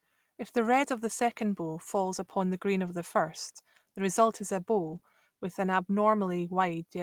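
Speech, with lost packets rebuilt from error correction at 2.05–2.07 s after "of the second bow", at 2.85–2.87 s after "upon the green", and at 4.83–4.97 s after "the result is a". Low-bitrate copies stand in for the missing audio, so there is no gap, but they sound rougher and show as grainy, noisier patches on a spectrogram. At 4.99–5.03 s there is a short concealed packet loss: about 20 ms was extrapolated from the preceding sound and blended back in, heard as a brief smear.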